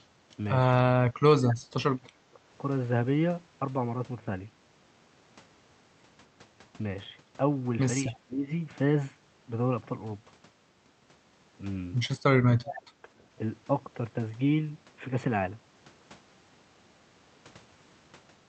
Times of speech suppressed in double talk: 0.84-1.72, 2.03-2.39, 8.09-8.50, 12.37-13.08

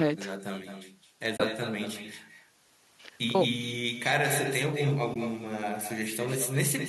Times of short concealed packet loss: none

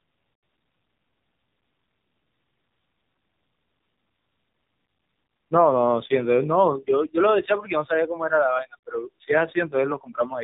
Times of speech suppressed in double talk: none

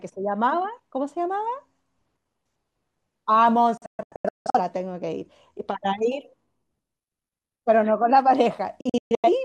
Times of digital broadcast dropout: 3.77-4.59, 8.81-9.29

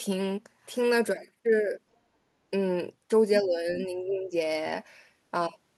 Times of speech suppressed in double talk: 3.40-4.34

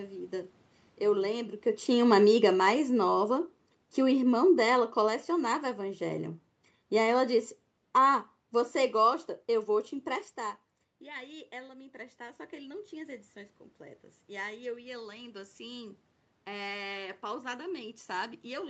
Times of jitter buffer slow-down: none

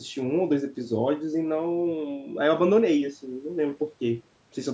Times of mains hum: none

